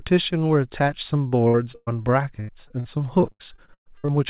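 From 1.28 s to 4.10 s, repeated packet loss gives the speech a choppy, robotic sound. Twenty gaps, the longest 118 ms, are each patched by extending the last sound. On a spectrogram this shows as smeared, repeating bands with abrupt breaks, all under the call path's 4 kHz ceiling.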